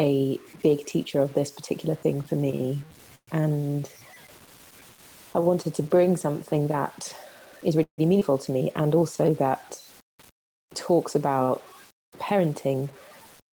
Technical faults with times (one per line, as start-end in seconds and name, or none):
0.00-13.52 low bit depth without dither
3.15-3.29 call audio freeze
7.83-8.00 call audio freeze
8.20-8.23 skip ahead
8.51-9.30 jitter buffer slow-down
12.31-12.82 jitter buffer speed-up